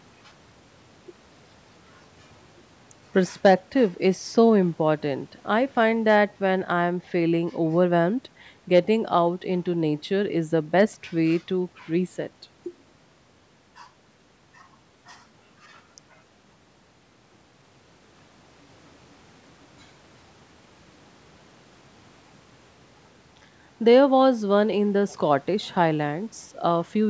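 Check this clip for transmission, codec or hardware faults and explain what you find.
No transmission or hardware faults turn up here, just speech that went through the usual call microphone processing, which trims the deepest bass and leaves nothing above 8 kHz, as you'd expect.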